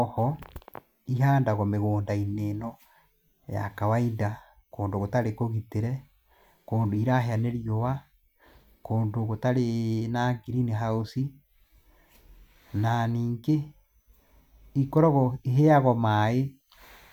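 Nothing in the recording stood out as a technical fault on listening.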